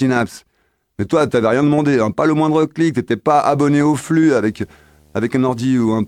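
A video or display buzz enters this speech clip at 4.50 s and runs to the end. It's a 75 Hz buzz with hash above it, coming from a screen or video cable coupling its field-rate interference into the audio path. The buzz sits quietly, well below the speech.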